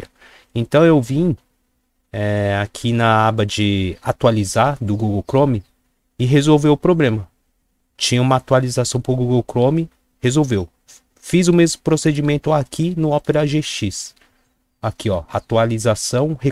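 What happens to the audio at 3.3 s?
Nothing goes wrong at 3.3 s; the audio plays through that moment intact, with no dropout, click or other disturbance.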